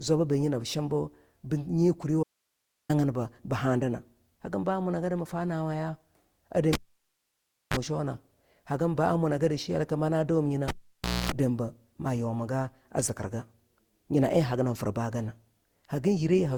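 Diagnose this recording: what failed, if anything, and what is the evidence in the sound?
At the codec stage, the speech has likely been through repeated lossy coding, consistent with around seven Opus passes at 64 kbit/s. This is generation loss. Each decode and re-encode quantises again on a shifted frame grid, so the coding noise and spectral gaps compound. Throughout the clip the voice sounds swirly and hollow, more smeared than a single 64 kbit/s encode would leave it, and consonant attacks lose their edges.

Between 2.23 and 2.89 s the signal path lost its input while everything downstream stayed live, most likely a break upstream of a still-powered stage. This is an audio dropout to a faint residue. For about 661 ms the speech stops abruptly, mid-flow, and only hiss remains, sitting about 50 dB below the speech level. The abrupt onset and return, with no fade, set it apart from a natural pause.

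The analogue wiring was disturbed twice, each time as a cable pulled and plugged in. From 6.73 to 7.77 s a pop opens near-silence lasting about 986 ms, with a 30 ms burst of 50 Hz mains buzz as the plug makes partial contact, then a second pop. From 10.68 to 11.32 s the same pattern repeats over 586 ms, this time with a longer 255 ms buzz at 60 Hz before the sound returns.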